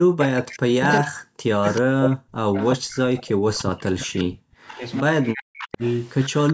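A far-end echo canceller likely let loudspeaker pickup return, so an echo leak appears as a faint copy of the speech trailing by 380 ms, from 0.18 to 0.59 s, at 1.75 to 1.81 s, 2.58 to 3.64 s, 4.18 to 4.22 s, 4.68 to 4.9 s and 5.58 to 6.53 s. It is roughly 10 to 20 dB below the speech. Across 0.2 to 2.97 s and 3.37 to 5.82 s, the canceller likely mistook overlapping talk for echo, and this speech suppressed in double talk makes the talker dip or drop out by up to about 40 dB.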